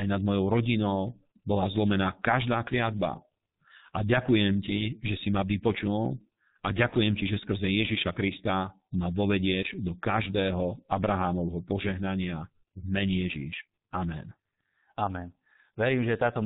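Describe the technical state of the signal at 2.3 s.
At 2.3 s the speech is passing through a G.723.1 codec, as it does for the whole clip, at a rate that points to about 6.3 kbit/s. The codec works in 30 ms frames with a slowly updated voice model and drops everything above 4 kHz, so the speech sounds heavily muffled and hoarse, with smeared consonants.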